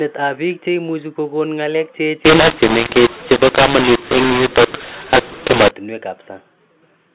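From 2.25 s to 5.71 s the decoder applies the wrong companding law: samples written as A-law are read back as mu-law, a mu-law and A-law mix-up. Each 8-bit code maps to the wrong level, so loud and soft parts of the speech are scrambled, and the quietest samples are pushed well above silence. The speech turns harsh and distorted, with noise in the gaps. Outside that span the band-limited G.711 telephone coding sounds as expected.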